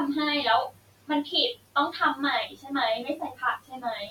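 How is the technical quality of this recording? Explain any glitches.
The recording has two audible problems, both from a noise suppressor working on room noise that sits about 20 dB below the speech.

Noise suppressor artifacts run through the whole clip. The background sinks in the gaps and swells back under the speech. The suppressor estimates the steady noise and pulls down each frequency band it judges to be noise, frame by frame.

Speech cut by the noise suppressor occurs at 0.7 to 1.27 s, 1.54 to 1.76 s, 2.47 to 2.71 s, 3.05 to 3.42 s and 3.58 to 3.84 s. In these stretches parts of the speech turn faint or swallowed, with the deepest dips about 19 dB at the first two and about 14 to 17 dB at the later three. Within each span only a portion is hit, about 400 milliseconds in the first and about 150 to 200 milliseconds in the others. The suppressor mistook quieter speech for background and turned it down along with the noise.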